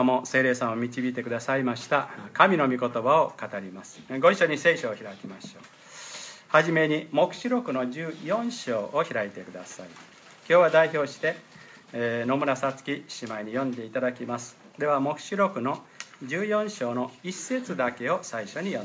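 Nothing stood out on listening to the clip.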